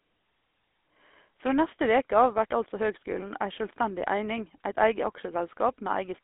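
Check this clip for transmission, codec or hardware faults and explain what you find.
Two faults are present: GSM full-rate coding across the whole speech clip, and a short burst of GSM bit errors near the middle.

The GSM full-rate codec is in place from start to finish. The encoder reduces speech to a vocal-tract filter driven by a sparse, regularly spaced pulse train, which fits the 13 kbps full-rate mode. The excitation keeps only a fraction of the original detail, so the voice comes out plainly buzzy and gravelly. The line passes roughly 250 Hz to 3.6 kHz, leaving it thin and muffled, with no low warmth or upper brightness.

GSM bit errors strike from 3.12 to 3.21 s, just after "veke av vert altså". Corrupted bits reached the decoder, so for those frames it rebuilt speech from wrong filter, pitch or gain values. The roughly 90 ms disturbance involves three damaged frames. The spectrum lurches or the level jumps, and the speech briefly breaks into a gargling squawk before clean decoding resumes.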